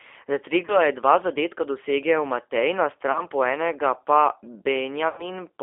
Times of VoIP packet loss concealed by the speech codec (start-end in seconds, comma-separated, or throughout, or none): 0.65-0.78, 3.12-3.22, 5.09-5.27